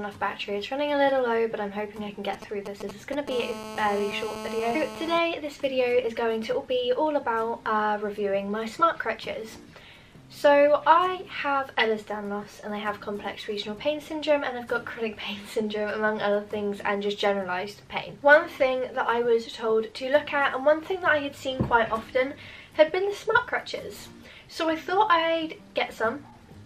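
From 2.33 to 3.29 s, a 2G handset close to the recording chain is exchanging brief signalling with its network, sending clustered radio bursts that the audio circuitry rectifies into the signal path. These GSM signalling bursts arrive as a galloping dit-dit-dit run of short buzzes built on the 216.7 Hz burst rate, sitting only around 10 dB under the wanted audio.

At 3.31 s a phone is in continuous call transmission, and its bursts repeat steadily at 216.7 Hz until 5.19 s. Demodulated by the audio stage, this becomes GSM phone buzz: a hard, harmonically rich 217 Hz rasp with no relation to the program material, holding a nearly steady level about 11 dB below the signal. Because the interference no longer pauses, the galloping rhythm gives way to one unbroken drone.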